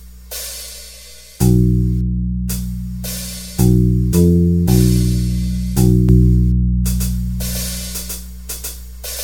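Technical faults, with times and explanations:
6.09 s to the end: doubled audio track. From 6.09 s the music is joined by a second, full-band copy of itself about 150 ms behind, at roughly equal level. It cuts in abruptly, with no decay or room colouring, which separates it from a reflection or reverb; likely a slower second capture path.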